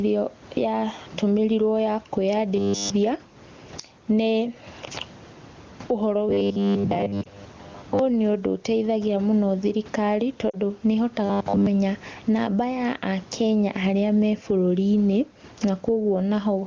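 Gain pumping runs through the whole recording. The level swings by roughly 15 dB, with loud and soft parts pulled closer together and the sound squashed. This is likely from input gain set too high and a fast limiter clamping down on peaks.

From 2.56 to 2.90 s, robotic sound from repeated short buffers replaces the speech with a rigid, metallic 100 Hz buzz. That rate points to a 10 ms block being looped, likely because fresh audio arrived too late. Here essentially all of the passage is repeats.

The same fault returns from 6.29 to 7.99 s with most of the audio repeated. Inside it, at 7.23 to 7.28 s, lost AMR speech frames appear: one 20 ms frame was concealed by the decoder, giving a brief dip or warble.

At 10.49 to 10.55 s, two lost AMR frames (40 ms) produce a short drop to near silence before the speech returns weak or rough for a moment.

The buzzing comes back from 11.26 to 11.67 s, again at 100 Hz, with the whole stretch repeated.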